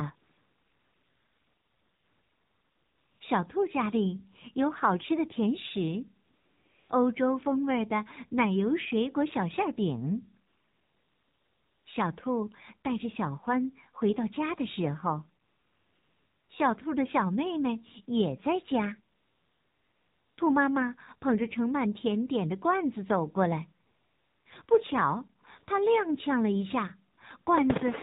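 Speech that sounds buzzy, synthetic and dull, with nothing above 4 kHz. This is the AMR narrowband mobile codec, and the degree of damage fits a low mode of about 7.4 kbps. Pauses are replaced by a smooth, steady hiss that switches in and out. This is AMR comfort noise: the phone stopped sending speech frames and the receiver filled each gap with synthetic noise. It occurs eleven times between 0.16 s and 27.46 s. The longest fill runs about 3 s from 0.16 s. Others of 0.6 to 1.4 s follow up to 24.46 s, then brief 20 to 60 ms flickers between 24.66 s and 27.46 s.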